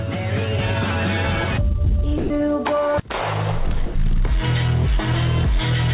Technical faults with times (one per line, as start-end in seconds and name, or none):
2.18-2.30 sound dropped by the voice detector
3.86-3.95 sound dropped by the voice detector